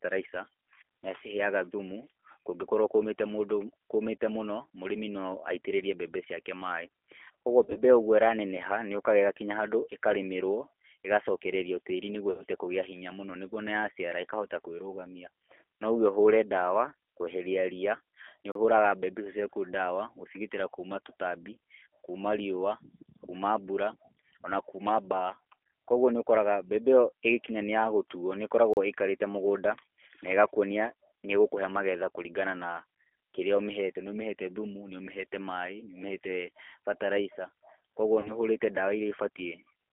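Speech coded throughout with the G.729 codec at 8 kbit/s: its pitch-and-pulse model rebuilds the signal on a telephone band of 300 Hz to 3.4 kHz, so the sound is plainly rough, synthetic and dull, with nothing above 3.4 kHz. VoIP packet loss concealed by the speech codec appears three times. The decoder had to extrapolate missing frames and faded them out, giving brief buzzy, smeared stretches that recover slowly at 7.64 to 7.81 s (about 70 ms lost in short runs scattered over 120 ms), 12.31 to 12.43 s (80 ms) and 38.20 to 38.32 s (40 ms). There are also two blocks of digital silence, where the output buffer was likely left empty for about 35 ms. At 18.52 s, just before "ũhũraga mbembe icio ciaku", and at 28.74 s, just after "yagũtuo nĩ", the sound drops abruptly to nothing.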